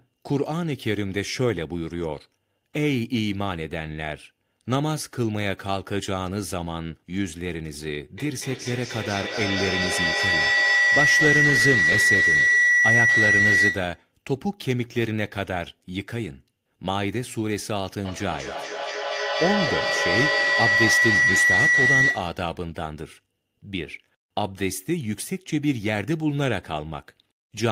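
Feedback howl rises at 8.18 s until 14.07 s, then again from 18.05 s to 22.48 s: a microphone-loudspeaker loop regains level each pass, narrowing to a piercing tone near 2 kHz, pulsing roughly every fifth of a second, peaking about 5 dB above speech. Spectrograms show bright horizontal bands; waveforms swell.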